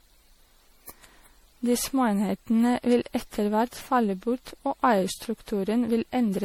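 Throughout the speech, the sound is swirly, hollow and smeared, with blurred consonant attacks. This is generation loss, likely from re-encoding around seven times at a setting that fits MP3 at 64 kbit/s. A spectrogram shows patchy spectral holes, smeared transients and nothing above 19.6 kHz.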